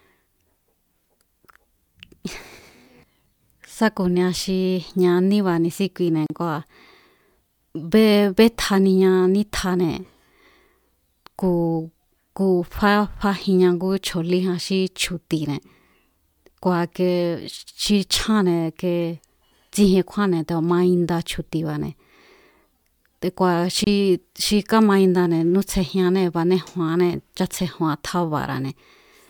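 Speech, and twice the sound drops into a brief hole: at 6.26 s for about 36 ms and at 23.84 s for about 26 ms. Both are gaps at a join of encoded pieces. The audio was encoded in separate chunks and spliced without trimming, so each encoder's start-up delay and last-frame padding stayed in as silence. You can hear the smeared edges, and then the speech picks up exactly where it left off.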